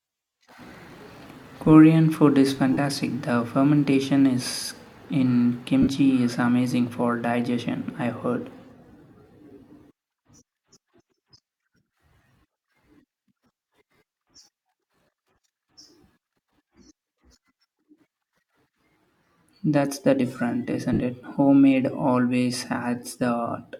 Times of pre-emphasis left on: none

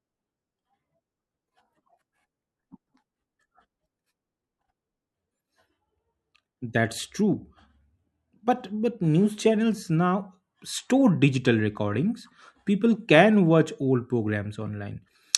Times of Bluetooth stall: none

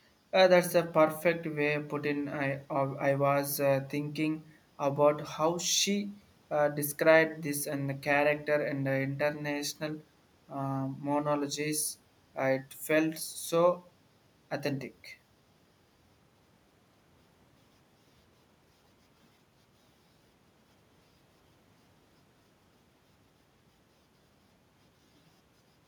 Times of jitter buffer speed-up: none

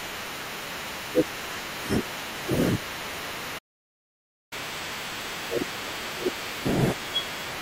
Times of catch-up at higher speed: 4.53-7.53

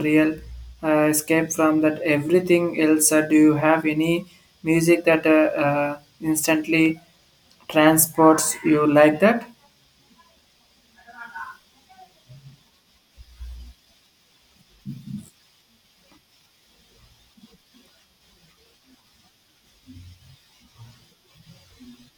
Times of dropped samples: 6.86

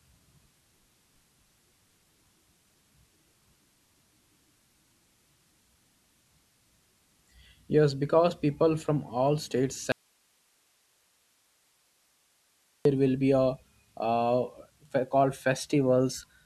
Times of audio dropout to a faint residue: 9.92-12.85

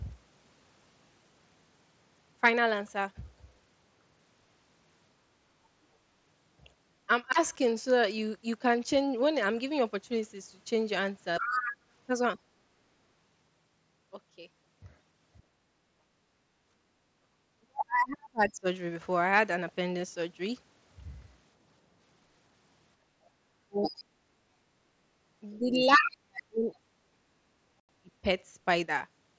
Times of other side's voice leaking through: 11.39-12.39, 23.83-26.77

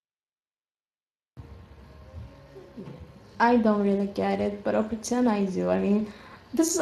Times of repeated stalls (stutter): none

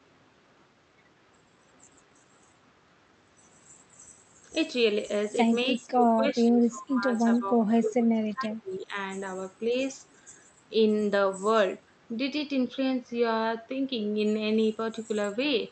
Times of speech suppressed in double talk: 5.66-8.96

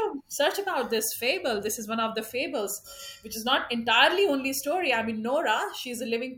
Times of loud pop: none

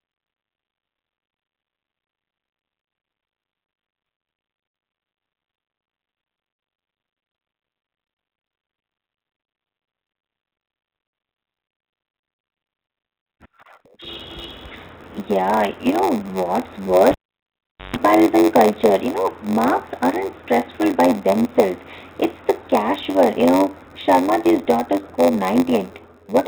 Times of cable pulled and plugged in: 17.11-17.96

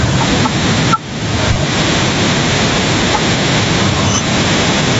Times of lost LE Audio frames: 1.53-1.56, 3.12

